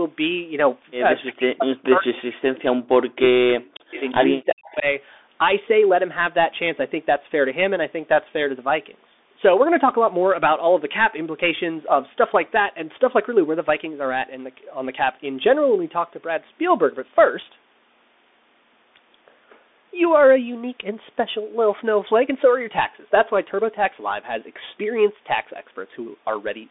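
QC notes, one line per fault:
throughout, Bluetooth CVSD headset codec: nothing above about 3.8 kHz, scratchy s sounds and a granular hiss under the speech, which fits a 64 kbps CVSD headset link.
1.31–4.02 s and 4.34–4.86 s, speech suppressed in double talk: the talker dips by about 40 dB in patches, about 2 s then half a second, likely the echo canceller ducking during crosstalk.
3.99–4.15 s and 4.67–4.74 s, echo leak: a faint copy of the speech comes back 352 ms late, about 25 to 30 dB down, likely loudspeaker pickup the canceller missed.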